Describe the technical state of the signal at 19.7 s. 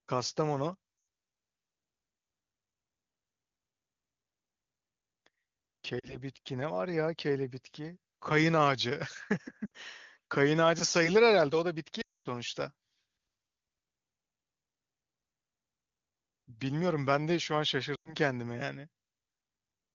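At 19.7 s the signal is intact, with the speech carried cleanly through the AMR wideband (HD Voice) codec at 23.85 kbit/s and no fault present at that moment.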